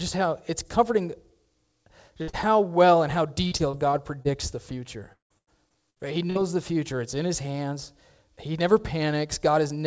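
At 2.22 s comes a burst of packet loss: roughly 60 ms of audio never arrived, so the receiver stretched the last sound into a held, dimming sound until 2.30 s. On a spectrogram the last spectrum flattens into straight horizontal lines that fade, and the waveform's envelope sags before playback jumps ahead.

Immediately after, from 2.30 to 2.35 s, a short concealed packet loss patches another 40 ms hole with continued sound, heard as a brief smear. It shows as a smooth, oddly uniform patch where the real detail, already band-limited at 8 kHz by the call codec, should vary.

From 3.47 to 4.27 s there is repeated packet loss (robotic sound): five gaps, the longest about 41 ms, with about 14% of the stretch concealed, making a choppy texture. It returns more heavily from 5.13 to 6.37 s, where six gaps include one of 174 ms and about a third is filled in. Spectrograms show repeated blocks of frozen, smeared harmonics, and the waveform shows recurring flat, decaying stretches.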